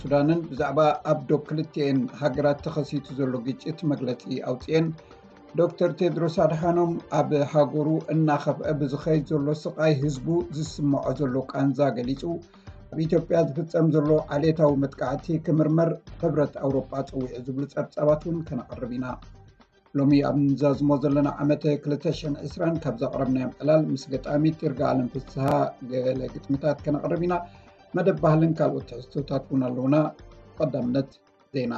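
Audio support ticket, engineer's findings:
Chunks out of order, 25.48 to 25.52 s. Buffering or write path delivered one block two positions late. Blocks are about 10.7 ms. No audio lost; sequence scrambled across roughly 32 ms. Three hard joins where mismatched blocks abut. Audible as a brief jumbled smear.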